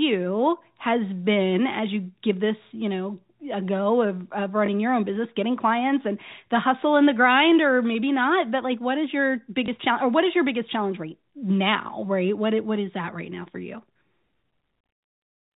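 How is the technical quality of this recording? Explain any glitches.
The speech has two brief glitches, both from packet loss with the last packet repeated. It runs through G.711 telephone coding, so nothing above 4 kHz comes through.

The glitches fall at 4.66 to 4.68 s and 9.66 to 9.68 s. Each gap lasts 20 ms, which fits one lost 20 ms packet. The receiver replays the previous packet to fill it. The result is a small blip.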